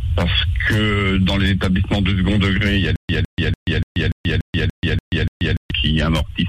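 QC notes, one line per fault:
2.96 to 5.71 s, stutter with silent gaps: a 157 ms burst of the same audio repeats 9 times, each followed by 133 ms of dead digital silence, a steady 290 ms cycle. Likely a stalled stream replaying its last fragment, with the audio in between lost.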